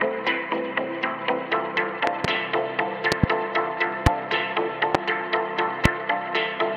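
Loud pops occur at 2.07–2.27 s and 3.12–3.26 s, each a quick pair, then single pops at 4.06–4.09 s, 4.95–4.97 s and 5.85–5.88 s. Each jumps about 25 dB above the surrounding sound, a sharp thump laid on top while the audio continues underneath. They are likely sudden voltage pulses from a switch, plug contact, static discharge or driver glitch, shaped by the following circuitry.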